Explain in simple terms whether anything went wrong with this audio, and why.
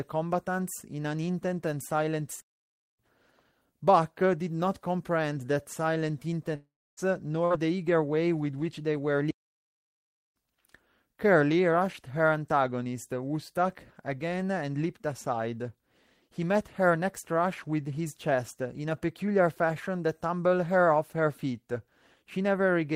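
Yes, several things go wrong. At 2.40 to 2.99 s and again at 9.31 to 10.36 s the speech simply stops dead, for about 0.58 s and then about 1.05 s. This is a playback stall, likely the player running short of data, and it differs from a dropout because the silence is clean, with no buzzy tail.

From 6.55 to 7.00 s there is a long network dropout. The last sound is stretched into a fading buzz or hiss for a moment, then roughly a quarter second of near silence follows, and the speech returns about 0.42 s further on, with that stretch likely lost in transit rather than merely delayed.

At 7.45 s a much shorter burst of packet loss happens, lasting about 0.08 s. The sound is held as a brief buzz or hiss before picking up 60 ms further on, with that snippet missing. It is too short to fade into silence, which tells it apart from the longer dropout just before.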